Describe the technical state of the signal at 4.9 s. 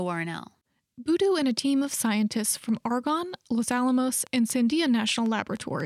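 A train of clicks runs from 4.27 to 5.81 s: about seven similar pulses, unevenly spaced near 3.9 per second, poking above the speech, likely from electrical interference.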